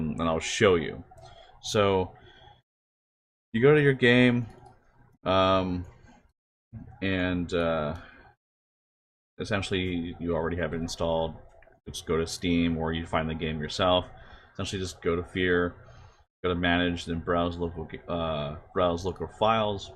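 No technical faults can be heard anywhere in the clip.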